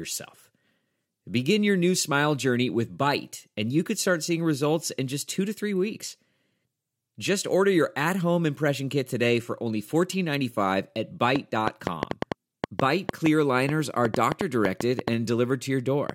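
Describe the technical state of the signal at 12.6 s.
At 12.6 s the speech sits inside a train of clicks running from 11.36 to 16.10 s: around twenty sharp ticks at about 4.2 per second, unevenly spaced and well above the speech, likely from electrical interference or a faulty connection. They show as thin vertical broadband lines on a spectrogram and as narrow spikes on the waveform.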